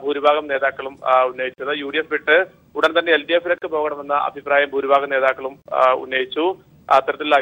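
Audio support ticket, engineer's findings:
Gap at a join of encoded pieces at 1.54–1.58 s (44 ms), 3.58–3.62 s (38 ms) and 5.62–5.66 s (38 ms), recurring every 2.0 s. Segment concatenation after encoding: untrimmed start delay and end padding are left in. Unlike a dropout, the spacing is regular and the sound resumes where it stopped, with nothing skipped.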